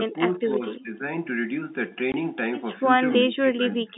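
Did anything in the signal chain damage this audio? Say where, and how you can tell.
Yes. The speech ducks sharply from 0.06 to 0.64 s, again from 0.82 to 1.02 s, and from 2.98 s to the end, sinking by roughly 15 dB, and nearer 20 dB in the last stretch. That points to call processing, likely speech suppressed in double talk, where the echo canceller mistook this side's talk, overlapping the far-end sound, for echo and attenuated everything.

From 2.12 to 2.14 s the speech cuts to dead silence with abrupt, hard edges. This is packet loss filled with silence at the network stage. The 20 ms gap fits one lost packet that the receiver replaced with silence instead of concealing it.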